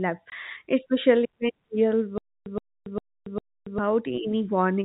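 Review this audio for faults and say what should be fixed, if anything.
At 0.30 s a single 20 ms hole drops out of the speech just before "especially when", with hard edges on both sides. This is packet loss filled with silence: one packet never arrived and the receiver played silence in its place, so the gap matches the packet length exactly. Adding packet loss concealment or forward error correction at the receiver would prevent it.

From 2.18 s to 3.78 s the same 120 ms burst of speech repeats four times, each separated by about 280 ms of dead digital silence, giving an even 0.40 s cycle. This is stutter with silent gaps, likely from the player or stream stalling, replaying its last fragment at each retry, then running empty while the audio meant for that span is lost. A larger playout buffer and underrun handling that fades out instead of repeating would prevent it. The G.711 telephone band, capped at 4 kHz, carries through unchanged.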